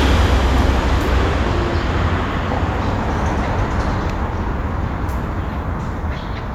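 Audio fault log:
throughout: resampler restarted on every block. Each 20 ms block is converted without its neighbours, so every edge carries an error, heard as a 50 Hz buzz wherever sound is present; fits a 48 kHz to 44.1 kHz conversion.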